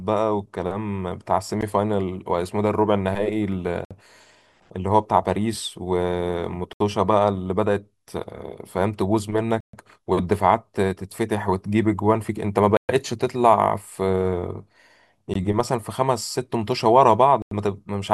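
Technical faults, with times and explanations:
1.61, 3.85–3.91, 6.73–6.80, 9.60–9.73, 12.77–12.89, 15.34 and 17.42–17.52 s, Bluetooth stall: the speech drops to silence for 14 to 129 ms, then resumes where it stopped, likely from the headphone buffer running dry while resent packets arrived.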